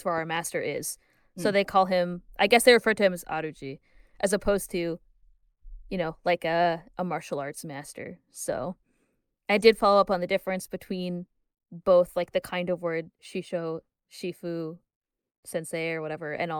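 Nothing in the speech stood out as a technical fault on listening.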